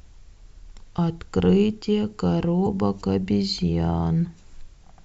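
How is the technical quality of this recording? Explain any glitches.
There is one glitch in the speech. From 2.63 to 2.67 s there is damaged data in the compressed stream. Some bytes in that stretch are corrupted. The decoder misreads those frames and loses sync while it hunts for the next valid header. The result is a short squawk or blip of about 40 ms.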